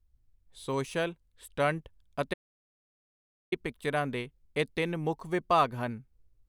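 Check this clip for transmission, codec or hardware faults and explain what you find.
One fault stands out: an audio dropout to silence from 2.34 to 3.52 s. The speech cuts off abruptly and about 1.18 s of silence follows. Even the room tone disappears, so the gap is truly empty. The likely cause is a brief loss of the input signal, such as a disconnected device, a failed link or an accidental mute. The recorder kept writing silence until the signal returned. Whatever was spoken in that span is lost.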